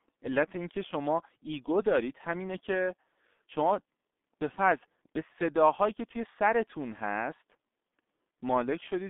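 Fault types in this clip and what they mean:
G.723.1 codec: heavy damage from a low-rate telephony codec, consistent with about 6.3 kbit/s. The speech is muffled and hoarse, with blurred consonants. A spectrogram shows nothing below 200 Hz or above 3.6 kHz, and harmonics smeared into coarse 30 ms blocks.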